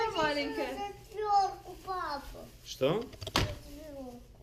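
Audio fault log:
Nothing stood out on listening to the clip.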